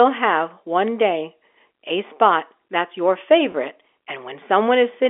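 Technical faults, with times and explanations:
3.52–3.54 s, packet loss with pitch repetition: just after "a spot that's your", about 20 ms of audio goes missing, which fits a single lost packet. The receiver bridges the gap by repeating the last pitch period, so the sound briefly holds with a slightly buzzy quality on the band-limited G.711 telephone line.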